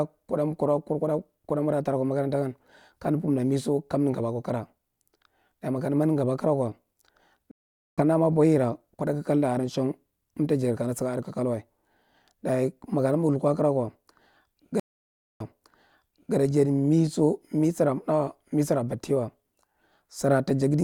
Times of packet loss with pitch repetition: none

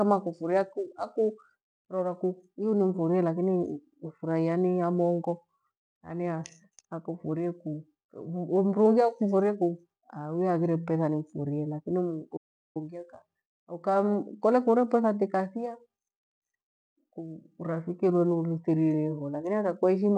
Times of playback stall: 12.36-12.77

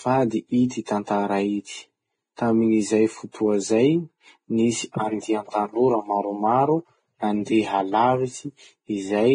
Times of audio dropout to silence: none

